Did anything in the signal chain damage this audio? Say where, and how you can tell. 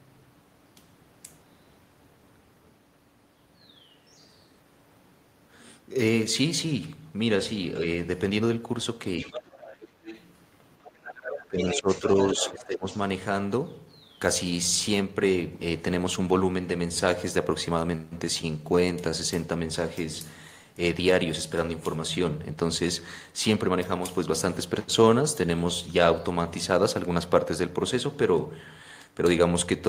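Yes, in the call processing stage. The other side's voice leaking through is audible at 9.2–9.88 s, 10.04–10.25 s, 10.83–12.67 s and 12.91–13.01 s, sitting roughly 10 to 25 dB under the talker. This is likely residual loudspeaker echo that the echo canceller failed to remove from the microphone signal.

Speech suppressed in double talk occurs at 11.48–12.04 s and 12.34–12.85 s. The talker's level dips by around 15 dB while the far-end voice is present. The canceller likely could not separate near speech from echo and attenuated both.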